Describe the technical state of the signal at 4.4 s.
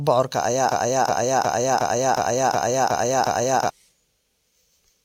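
At 4.4 s the speech signal is intact, with no audible fault.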